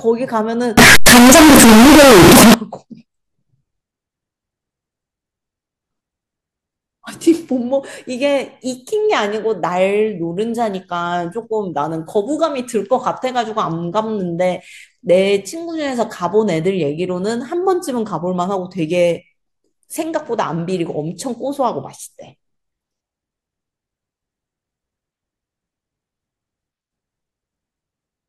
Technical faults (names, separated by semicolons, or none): float read as integer